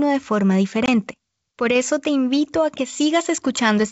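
From 0.86 to 0.89 s, packet loss on an ADPCM call drops about one 20 ms packet and desynchronises the decoder's predictor. The result is a hard-edged silent gap, then speech returning slightly distorted.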